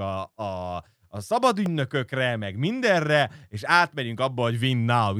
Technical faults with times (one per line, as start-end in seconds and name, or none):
1.66 electrical switching spike